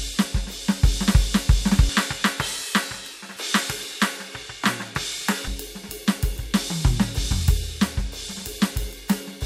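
From 1.89 s to 5.48 s the music was likely captured through a poorer device after an input switch, without any gap. Nothing above 13 kHz survives, the level drops by around 5 dB, and a faint new noise floor appears, dulling the sound until it clears again.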